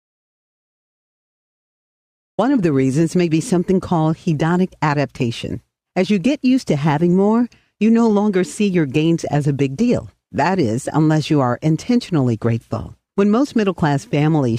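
The audio opens in silence. This is an audio dropout to silence, already under way when the clip begins. It lasts from 0 to 2.38 s. There is no room tone or noise floor in the gap. At 2.38 s the sound comes in abruptly, as if mid-flow. Whatever was present during those first seconds is lost. The likely cause is a lost input, such as a disconnected device, a failed link or a mute, while recording continued.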